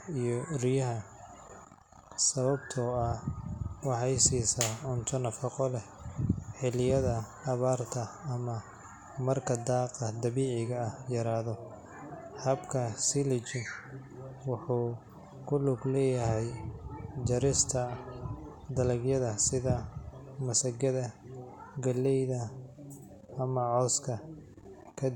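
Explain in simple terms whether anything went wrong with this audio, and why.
Nothing went wrong with this audio: listening through the speech, there is no fault to hear, so there is nothing that needs explaining.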